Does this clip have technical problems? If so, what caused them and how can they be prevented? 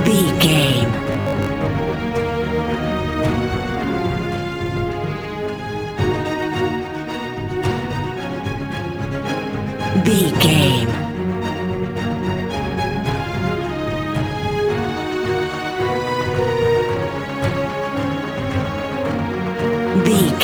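Yes. Throughout the clip a fine hiss and graininess rides on the sound. It thickens on loud passages and bright, high content and disappears in the quiet gaps. This is sample clock jitter. The converter's clock wanders by a few microseconds, so each sample is taken slightly early or late. Steep, fast-moving parts of the waveform turn that timing error into noise, here roughly 30 dB below the signal. It can be prevented by clocking the converter from a clean, stable crystal or a low-jitter word clock rather than a noisy recovered one.

From 1.13 to 1.51 s the sound turns into a rigid, metallic buzz at a fixed 50 Hz. It still loosely tracks the underlying sound. This is robotic sound from repeated short buffers, and it likely comes from audio arriving too late. The playback software fills the gap by looping the last 20 ms chunk, which sets the 50 Hz pitch, and about half the real audio is skipped. 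It can be prevented by using a larger buffer and giving the audio thread enough priority that it never runs dry.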